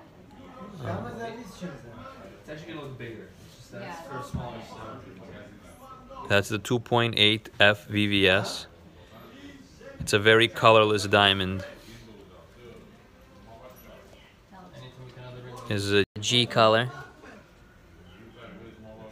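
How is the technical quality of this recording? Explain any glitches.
Two linked glitches near the end, one right after the other. At 16.04 s there's a playback stall: the sound just cuts to silence for about 120 ms, until 16.16 s, and then carries on from where it stopped. That gap is likely the player running dry on buffered data or having its audio thread held up briefly, so nothing reached the output until it recovered.

Right after, from 16.16 to 17.36 s, you get catch-up at higher speed. The player is making up the lost time by resampling its backlog to run 1.1 times faster, and because resampling moves pitch along with tempo, everything sits roughly a semitone and a half sharp and slightly rushed for that 1.2 s stretch. At 17.36 s it drops back to normal speed and pitch, which you can hear as a small downward shift.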